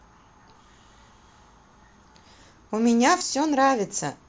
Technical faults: concealed Bluetooth headset packet loss

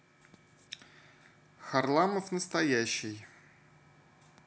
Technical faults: none

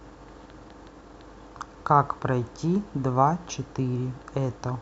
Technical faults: none

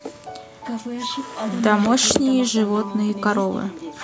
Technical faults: none

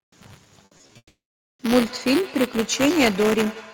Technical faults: buffer tearing; repeated packet loss (robotic sound); long network dropout; feedback echo between two devices

